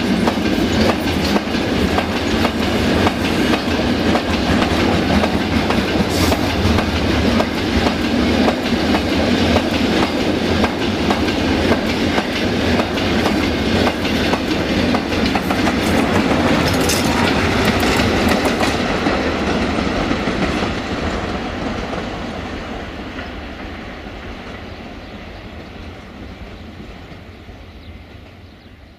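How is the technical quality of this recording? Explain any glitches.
No glitches or faults can be heard anywhere here.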